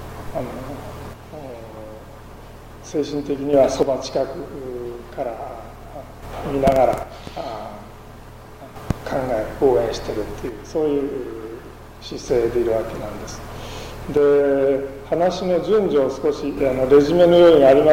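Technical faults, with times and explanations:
1.13–3.53 s, 3.83–6.23 s, 7.03–8.76 s, 10.49–12.28 s and 14.17–16.57 s, one channel drops out: likely one side of the stereo signal going silent for 1.7 to 2.4 s at a time. In the mono sum, sound common to both sides falls abruptly by about 6 dB, and anything carried only on the lost side disappears until the channel returns.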